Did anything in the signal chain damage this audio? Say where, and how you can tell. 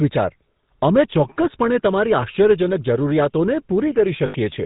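Yes. Throughout, the speech has a buzzy, gravelly roughness with nothing above 4 kHz. That is the GSM full-rate codec at 13 kbps, which rebuilds the voice from regularly spaced excitation pulses.

From 4.26 to 4.35 s, the sound freezes into a rough, metallic ring for about 80 ms. These are lost GSM frames, probably four 20 ms frames, which the decoder replaced by repeating the last good frame.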